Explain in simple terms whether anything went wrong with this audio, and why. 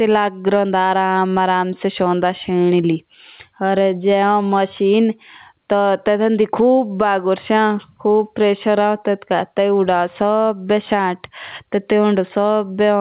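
Gain pumping runs through the whole clip: loud and soft parts end up closer in level and the sound is squashed, likely from gain set far too high with a fast limiter pulling it down.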